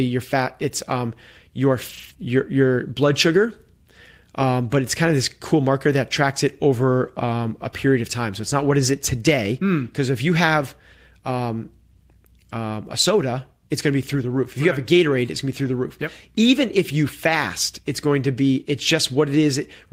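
Right around 1.89 s, just after "um your", there's a stretch of lost packet rebuilt from error correction running to about 2.11 s, before "your your blood sugar". Packets went missing, but each following packet carried a low-bitrate backup copy, and the decoder played those instead. So there's no gap, just about 120 ms of speech that turns grainy and rougher than the surrounding audio. That length fits a run of six 20 ms packets.

Immediately after, from 2.13 to 2.17 s, there's a short concealed packet loss. Here roughly 20 ms of audio never showed up at all, and the receiver patched about 17 ms of it by extending the last bit of sound before fading back into the real signal. You hear it as a quick smear or tiny wobble right after that rough patch.

At 15.65 to 15.67 s, right before "the roof", there's another lost packet rebuilt from error correction, this time a single 20 ms frame. It's a brief grainy blip rather than a dropout.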